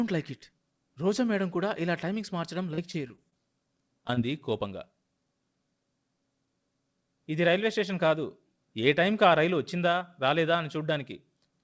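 Between 2.74 and 3.33 s, the connection dropped or delayed packets repeatedly, and the receiver kept patching each hole by stretching the sound that came just before it. This is repeated packet loss with its robotic sound. There are five separate holes, the longest about 35 ms, so roughly a fifth of that stretch is synthetic fill. The result is choppy, with the real audio broken into fragments between the patches.

Shortly afterwards there are two brief instances of short concealed packet loss, from 4.07 to 4.11 s and from 4.15 to 4.19 s. Each time, about 20 ms of audio failed to reach the decoder in time. The receiver bridged the hole by extending the preceding sound and then blending back into the real signal. Each one is heard as a small smear or wobble. Through all of it, the call path limits the band, with nothing above 8 kHz, which fits a G.722 codec.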